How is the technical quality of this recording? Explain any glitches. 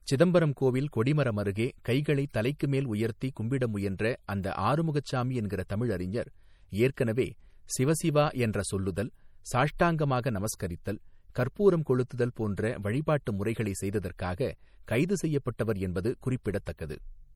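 The quality is limited by one fault that runs throughout the speech: low-bitrate audio saved at a high bitrate. The smeared, swirly artefacts likely come from an earlier MP3 pass, consistent with about 48 kbit/s, that the later 192 kbit/s encode cannot restore. Nothing is present above 20.1 kHz.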